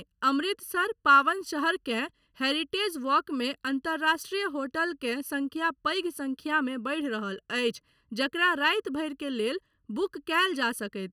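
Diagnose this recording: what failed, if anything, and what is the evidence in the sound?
One channel arrives late, by roughly three quarters of a millisecond, before the pair is folded to mono at the driver or buffer stage, producing channel delay (comb filtering). Throughout the speech, cancellations starting near 700 Hz and repeating at even spacing make it sound hollow and phasey.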